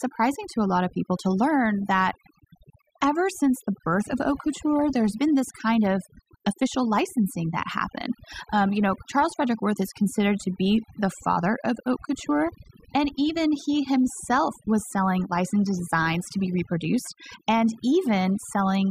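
From start to finish, the speech shows overdone noise removal. A noise reduction stage was run far too aggressively on a noisy recording, so individual frequency bands that dip close to its noise estimate are pulled down hard or gated out entirely. Low-level parts of the speech are caught in the same process. Between phrases the background drops and breaks up into twinkling, chirpy specks.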